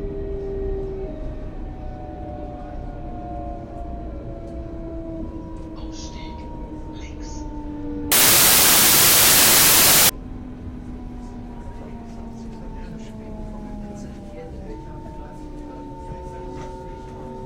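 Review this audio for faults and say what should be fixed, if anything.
From 8.12 to 10.09 s, the sound turns into loud, harsh broadband noise because the samples were built from the wrong bytes. Byte offset, byte order or alignment is misread, so the fast-changing low bits dominate each value. A spectrogram shows energy smeared across all frequencies, and the waveform becomes a dense, large-amplitude block. To prevent it, declare and verify the sample format, byte order and frame alignment at every read and conversion step.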